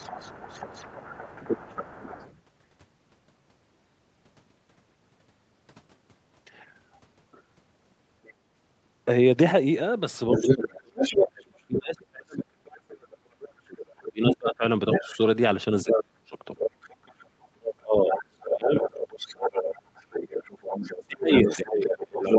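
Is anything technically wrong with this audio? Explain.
Yes. This speech clip has two kinds of fault, both tied to echo cancellation on a call.

The other side's voice leaking through appears from 0.0 to 2.41 s, at roughly 20 dB below the talker. A brief scrap follows at 8.24 to 8.33 s, much fainter, around 30 dB down. The worst stretch runs from 10.3 s to the end, where the leak is nearly as loud as the talker, only about 5 dB under. The likely cause is a loudspeaker feeding the far end back into the microphone, with the echo canceller failing to subtract all of it. On a spectrogram this shows up as a second, overlapping set of harmonic traces that don't follow the main talker's rhythm. In the waveform, energy fills gaps that should be quiet.

Speech suppressed in double talk occurs from 10.4 to 16.36 s, covering around four seconds in total and dropping by as much as about 35 dB. It occurs again from 17.75 to 18.73 s, about 0.7 s in all with drops near 25 dB, and finally from 21.07 s to the end, with dips of about 25 dB. 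The canceller likely mistook the talker for echo while both sides spoke, and attenuated everything. The talker audibly ducks and breaks up. The waveform shows abrupt envelope holes, and the spectrogram shows the talker's upper bands blanking out in patches.

Throughout, the call path's Opus coding caps content at 8 kHz, which the spectrogram shows as a flat ceiling.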